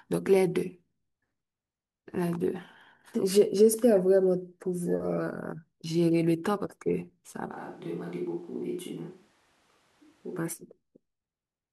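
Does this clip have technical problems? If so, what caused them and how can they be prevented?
Yes. From 7.53 to 10.36 s the close microphone likely dropped out, forcing a switch to a distant microphone: the speech abruptly turns roomy, hollow and thin, roughly 5 dB quieter, with more background noise. Monitoring the close-mic feed live and recording a backup close microphone would prevent it.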